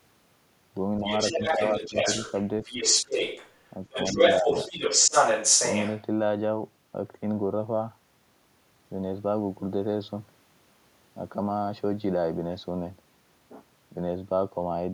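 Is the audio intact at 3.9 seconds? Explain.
No. From 3.86 to 4.14 s there's speech suppressed in double talk: the talker's speech sinks by around 20 dB, in pieces totalling about 150 ms. Both ends are likely talking at once, and the echo canceller, unable to tell near speech from loudspeaker echo, turns everything down.

From 3.94 to 6.02 s there's also the other side's voice leaking through, sitting roughly 5 dB above the talker. The echo canceller likely didn't fully strip the loudspeaker playback out of the microphone, so that second voice rides over the dip.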